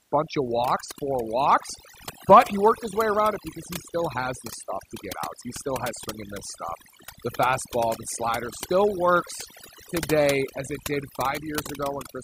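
Throughout, the background drops to near silence flecked with twinkling specks. That is overdone noise removal: a noise reducer set too strongly shuts down frequency bands near its noise estimate, stripping out quieter parts of the voice along with the noise.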